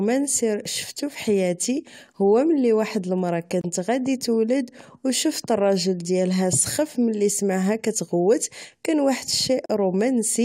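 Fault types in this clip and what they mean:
Gap between stream segments: the speech drops into two brief, hard-edged silences, one of about 27 ms at 3.61 s, between "هو ملي واحد المرى" and "غادي تولد أو شفت", and one of about 38 ms at 9.66 s, right after "سمعها كتغوت كان واحد". Adjacent segments, which fit a 2-second segment length, are time-stamped so they fail to meet, and the player pads the hole with silence. Nothing is removed; the sound simply resumes late.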